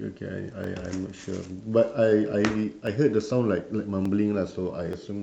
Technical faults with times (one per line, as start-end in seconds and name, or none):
0.64 dropped samples
2.87 dropped samples
4.05 dropped samples
4.93 dropped samples